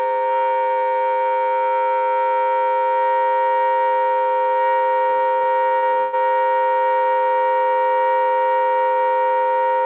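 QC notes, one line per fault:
5.10–6.15 s, repeated packet loss (robotic sound): the audio turns choppy, with pieces dropping out in quick succession. There are eleven holes in just over a second, the longest about 125 ms, and close to 40% of the stretch is patched over. Each hole is filled by stretching out the sound just before it, about 0.4 s in total, so the fill repeats before the next hole arrives. The call path's cut-off at 4 kHz, which fits a narrowband G.711-style codec, also band-limits these patches.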